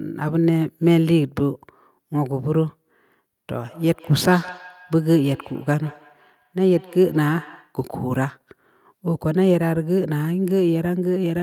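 From 3.64 s to 7.78 s the speech picks up a feedback echo between two devices. A second device in the same room plays the call back into this microphone, and the echo canceller, which only removes its own device's output, lets it through. Each phrase returns roughly 150 ms later, sitting about 22 dB below the speech at its loudest. On a spectrogram, faint copies of the harmonic patterns trail each syllable at that spacing; the waveform shows small echo bursts after each peak.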